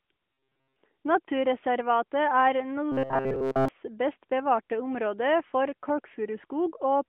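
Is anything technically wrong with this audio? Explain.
Yes, there's robotic sound from repeated short buffers, at 0.33–0.76 s and again at 2.92–3.68 s, just before "best bevarte område for". Audio likely arrived too late, so playback looped a roughly 7.5 ms chunk, forcing a rigid 133 Hz metallic buzz. Most of the first stretch is repeats, and the second is essentially all repeats. It's heard through the narrowband AMR-NB phone band, with nothing above 3.4 kHz.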